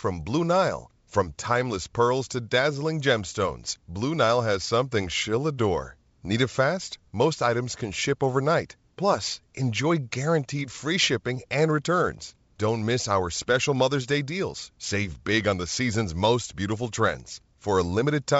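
No technical faults can be heard in the speech, which carries the bandwidth of G.722 wideband telephone coding at 64 kbit/s, reaching up to about 7 kHz with at most a faint trace of the codec.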